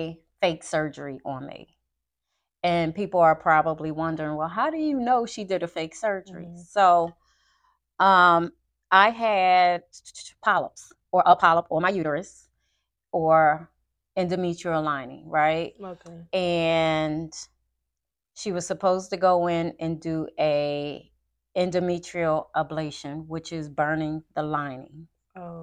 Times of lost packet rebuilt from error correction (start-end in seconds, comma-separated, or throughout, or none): none